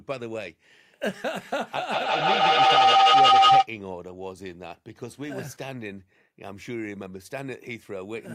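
It's a speech recording, and from 1.92 s to 3.70 s it runs into a classic feedback howl. Sound from one device's loudspeaker is getting back into a microphone on the same call, and each pass round that loop comes back louder. So it narrows to a tone of around 700 Hz, pulsing every fifth of a second or so, and peaks at about 15 dB over the speech before the loop gets broken.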